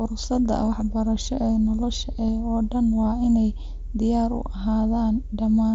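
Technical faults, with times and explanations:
2.28 s, concealed Bluetooth headset packet loss. A gap of about 7.5 ms, which fits a single lost frame, was filled by repeating the best-matching stretch of recent waveform. Being so short, it is nearly hidden within the mSBC-coded speech.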